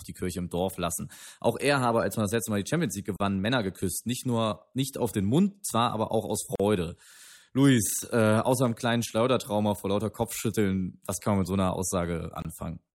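Gaps at a join of encoded pieces occur at 3.16 to 3.20 s and again at 6.55 to 6.60 s, lasting 38 ms and 42 ms. The speech was encoded in separate sections and butted together untrimmed, so each section's leading encoder delay and padded final frame survive as dead air. The result is a brief hole in continuous speech with smeared edges, after which the sound resumes exactly where it broke off.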